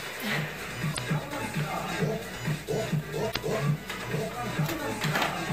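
Two short glitches break into the audio, one from 0.90 to 0.99 s and another from 3.28 to 3.38 s, each lasting under a tenth of a second. Both come from damaged data in a compressed stream: corrupted bytes make the decoder misread or reject the frames at those points and lose sync, producing the glitch until it locks onto a valid frame header again.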